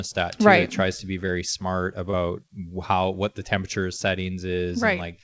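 Short concealed packet loss hits twice: at 1.27 s, just after "tries to be", and from 2.11 to 2.17 s, where late packets were patched from the preceding speech, leaving a brief smear.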